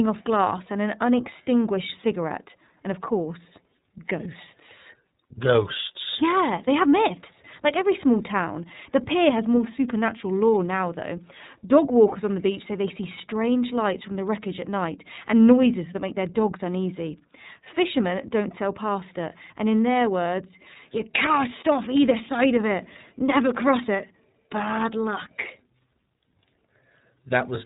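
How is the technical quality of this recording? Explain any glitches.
The quality is held back by low-bitrate narrowband coding for the whole clip. The speech comes through, but the codec damage is plainly audible from start to finish.

Throughout, this is the iLBC codec at work. Each frame's excitation is coded on its own, which fits 30 ms frames at about 13.33 kbps. Nothing above 3.8 kHz survives, so the speech sounds band-limited, rough and somewhat synthetic.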